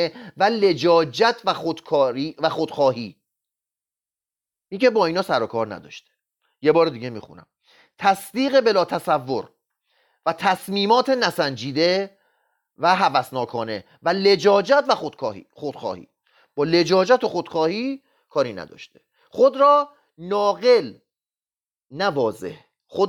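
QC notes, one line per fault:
Nothing to flag here; the speech runs along without any technical trouble I could hear.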